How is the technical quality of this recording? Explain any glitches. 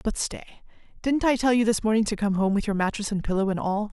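No glitches or technical faults can be heard anywhere in the recording, and the signal stays continuous and stable throughout.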